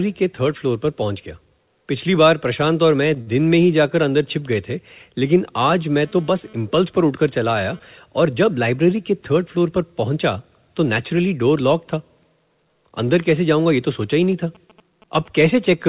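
From 3.21 to 3.29 s the speech hangs on one sound for about 53 ms with a slight buzz or dip, then resumes where it left off. This is a short stall from a late packet: the jitter buffer ran dry and stretched the last sound until the packet arrived, so nothing is lost.

Between 6.02 and 7.79 s a hard, raspy 217 Hz buzz rich in harmonics comes and goes, about 28 dB below the speech. This is GSM phone buzz from a nearby 2G handset transferring data, its radio bursts rectified by the audio circuitry.

From 14.23 to 15.75 s a galloping dit-dit-dit of brief 217 Hz buzzes appears, around 30 dB under the speech. These are GSM signalling bursts, short groups of transmissions from a nearby phone, picked up the same way.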